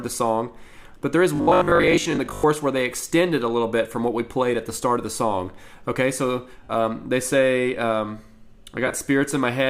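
From 1.36 to 2.44 s the audio takes on a robotic sound from repeated short buffers, a rigid 50 Hz buzz with roughly half the material repeated, likely from a 20 ms buffer replayed while real input arrived too late. Lost LE Audio frames cause a smeared, noisy gap from 6.63 to 6.69 s, about 53 ms long, where the LC3 decoder reused the previous spectrum with randomised signs. The same fault returns from 8.87 to 9.01 s as drops scattered across 135 ms, totalling about 68 ms, with the longest single run around 20 ms. Light lossy compression is also present.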